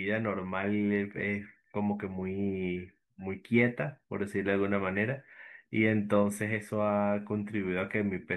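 No technical faults are audible anywhere in the speech, so there is nothing to report.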